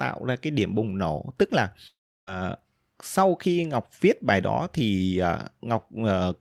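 Right after "bùng nổ tức là", at about 1.87 s, the sound cuts out until 2.29 s. It's likely a long network dropout. A brief fading buzz carries on briefly before roughly a third of a second of near-silence, and when the speech returns, about 400 ms of it is simply gone.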